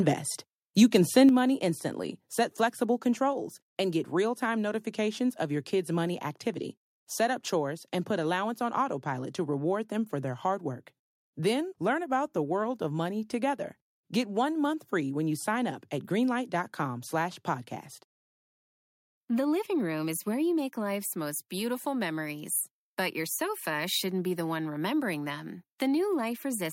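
Between 0.82 and 1.18 s, the microphone's input volume was likely set too high, and the loudest peaks pushed about 1 dB past the converter's ceiling. This microphone overload squares off the tops of those waveforms. Only a small fraction of samples is cut, but it is enough to put a harsh, crackling grit on the loudest syllables just before "money instantly set flexible".

The call software then likely reacted to that clipping by lowering the device's input gain, producing three microphone volume step-downs. The first, at 1.29 s, is the largest at about 6 dB. Voice and room tone drop together in a single abrupt step right as "money instantly set flexible" begins. Smaller cuts of about 1 dB each follow at 2.31 s and at 3.33 s, the last landing between "money instantly set flexible" and "and get real time".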